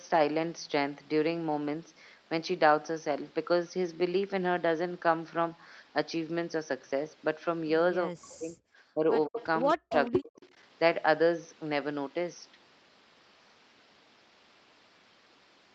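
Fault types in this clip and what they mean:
Speech suppressed in double talk: The echo canceller likely mistook overlapping talk for loudspeaker echo and turned everything down. Between 8.07 and 10.33 s the speech dips or cuts out in pieces, by up to about 40 dB over roughly 1.1 seconds in all.
Echo leak: The far end's echo canceller likely let part of its loudspeaker pickup through and sent it back. This is heard as short, delayed scraps of the voice about 153 ms late, at 9.38, 9.89 and 10.36 s, between about 10 and 30 dB below the speech.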